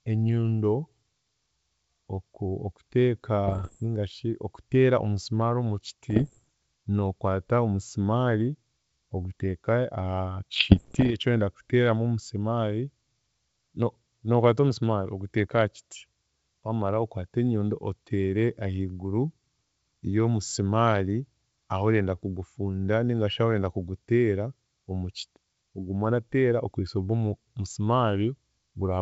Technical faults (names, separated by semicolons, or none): bit errors on an ADPCM link